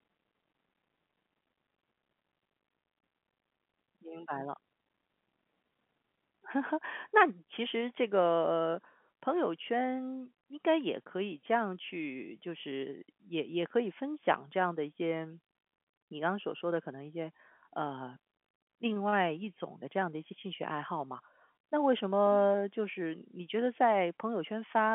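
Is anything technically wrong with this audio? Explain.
No, nothing in this speech recording points to a technical problem. It carries the narrow telephone band of G.711 telephone coding, running from about 150 Hz up to 3.4 kHz, which fits an ordinary 64 kbps mu-law phone line.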